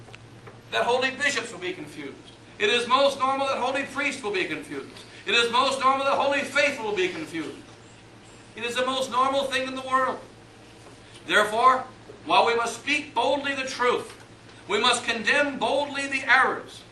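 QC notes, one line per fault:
No faults heard in this clip. Nothing in the audio calls for a QC entry.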